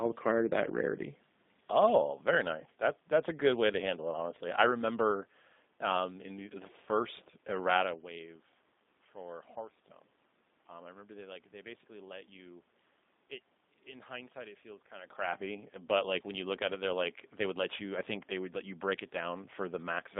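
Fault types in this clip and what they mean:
G.729 codec: speech rebuilt from a vocal tract model at a rate fitting 8 kbit/s, passing only 200 Hz to 3.7 kHz with plainly audible coding roughness.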